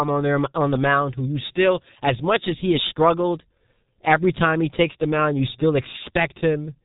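From start to finish, the speech carries the signature of the G.723.1 codec, applied heavily. Nothing reaches above 3.8 kHz, so the sound is muffled and lacks the air and sibilance of wideband audio. The coarse, slowly updated voice model gives a hoarse, buzzy texture, and consonants smear together because short transients fall inside long analysis frames. The degree of damage points to a bitrate in the region of 6 kbit/s.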